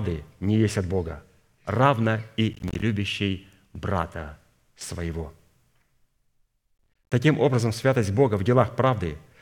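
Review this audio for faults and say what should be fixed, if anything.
Processor overload crackle occurs at 2.53–2.82 s and 6.78–7.12 s, just before "образом святость". Short buffers, around 10 ms each, repeatedly miss their deadlines and drop to silence, causing gritty tearing. Reduce processing load or enlarge the buffer.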